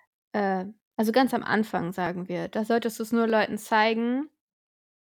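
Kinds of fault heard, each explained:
Dropped buffer (overrun): Two brief jumps interrupt the speech, each a small skip forward with no silence. One falls just before "wir da solltest du", the other just after "solltest du es nur". Likely, the hardware overwrote a few milliseconds of samples before the program read them.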